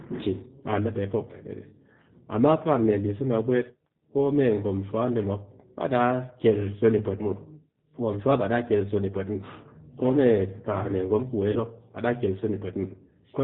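Speech runs the whole way through with a slightly rough, synthetic edge, and nothing above 4 kHz comes through, so sibilants are dulled and the sound has a narrow telephone quality. That is plainly audible G.729 codec damage. The decoder rebuilds each 10 ms frame from a vocal tract filter, a pitch predictor and a few pulses, which fits a G.729A stream at 8 kbit/s. Between 11.51 and 11.60 s, right after "kar mee gwom ku", the sound smears into a brief buzzy or noisy tone that fades before "mop baa daa kel" returns weak or distorted. This is VoIP packet loss concealed by the speech codec. About 40 ms of audio went missing, which fits two lost packets. The decoder filled the gap by extending its last pitch and filter settings while lowering the gain, and because every frame depends on the previous one, the damage lasts a little past the end of the gap.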